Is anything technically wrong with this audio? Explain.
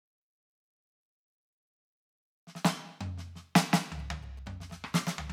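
Yes. From 3.76 to 4.95 s the music is overlaid by a galloping dit-dit-dit of short buzzes at about 217 Hz, sitting roughly 25 dB below the music. These are GSM signalling bursts. A nearby 2G phone was exchanging brief groups of radio bursts with the network, and the audio circuitry rectified that RF energy. This left the burst repetition rate as audible buzz, arriving in irregular clusters rather than as a steady tone.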